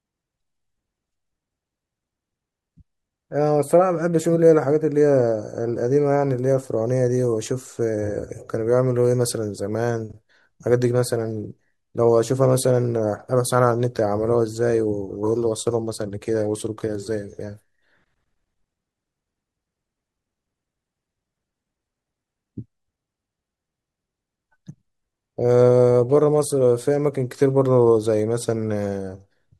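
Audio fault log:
No technical faults are present in the speech recording; the signal holds steady across its whole duration with nothing in it that calls for attention.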